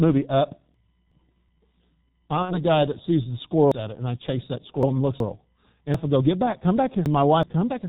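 The whole recording carries the heavy sound of the G.723.1 codec at 6.3 kbit/s. Nothing above 4 kHz survives. The speech sounds muffled and hoarse. Consonants blur, because the coder's slow voice model cannot follow fast changes.

From 0.74 to 1.49 s, chunks play out of order. A segment of about 372 ms arrives one chunk late and plays after the one that should follow it. The moment sounds jumbled.

At 2.43 s, VoIP packet loss is concealed by the speech codec until 2.62 s. About 60 ms is missing, which fits two lost 30 ms frames. The decoder stretches the last sound and lets it fade. The voice stays weak or distorted after packets return.

From 3.72 to 5.20 s, chunks are out of order again, this time three chunks late. The sequence garbles audibly.

The same fault returns from 5.94 to 7.43 s. A chunk plays three places late, jumbling the passage.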